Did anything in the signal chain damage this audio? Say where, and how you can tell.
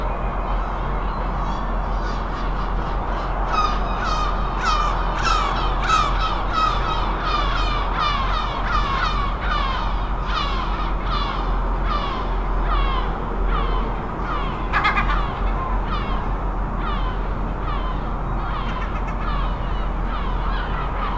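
No, nothing in the signal chain stood out as damaging this audio on listening.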